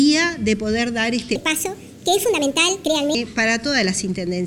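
From 1.36 s to 3.15 s the audio suddenly turns high and hurried, running at 1.45 times its proper speed, with the pitch lifted by roughly seven semitones, then drops back to normal at the end of that stretch. This is a section at the wrong speed. Because tempo and pitch jump together at one instant, the likely cause is that this span was played or edited against the wrong clock rate.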